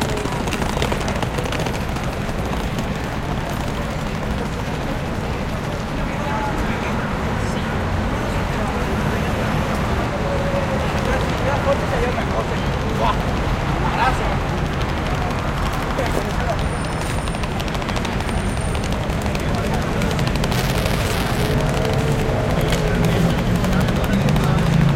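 From 20.52 to 21.55 s, buffer tearing puts a rattly 345 Hz buzz over the sound, fitting a 128-sample buffer where a small slice replays audio about 10 ms stale. The spectrogram shows comb-like 345 Hz harmonics, and the waveform shows hard jumps every period.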